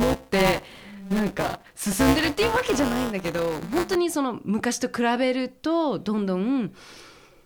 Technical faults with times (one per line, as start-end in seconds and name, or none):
0.00-3.95 buffer tearing